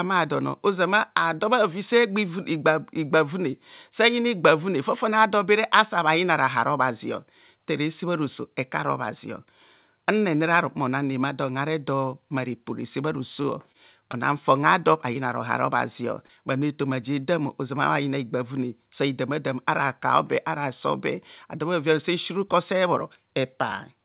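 From 13.42 to 14.15 s, between "mma repo resebha" and "fon a do", repeated packet loss (robotic sound) occurs: four gaps, the longest 24 ms, each patched by extending the last sound. The speech turns choppy, with pieces missing. On a spectrogram the harmonics smear into flat, repeated slices, and the waveform shows near-identical copied cycles.

Short concealed packet loss follows at 15.13 to 15.17 s, just after "fon a do", and again at 16.27 to 16.31 s. Each time about 20 ms went missing and was bridged by continuing the previous sound, heard as a brief smear or wobble. A spectrogram shows a short, frozen vertical band, and the waveform shows a small repeated stretch. Throughout, the band stops at 4 kHz, which points to a narrowband G.711 A-law call codec.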